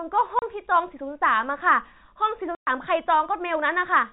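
Lost packets were replaced with silence, a fault known as packet loss filled with silence: the speech drops out from 0.39 to 0.42 s and again from 2.55 to 2.67 s. These 30 ms and 120 ms holes fit a 30 ms packet, and their edges cut off abruptly against the narrowband telephone sound.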